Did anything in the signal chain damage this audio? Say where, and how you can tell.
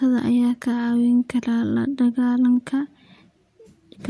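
No, nothing damaged this audio.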